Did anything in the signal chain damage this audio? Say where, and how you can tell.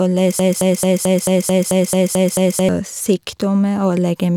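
Yes. From 0.39 s to 2.69 s the speech sticks on a 220 ms fragment that repeats exactly, back to back, ten times, like a broken-record loop. The likely cause is a stalled player or stream buffer replaying its last held fragment, so the intervening audio is lost.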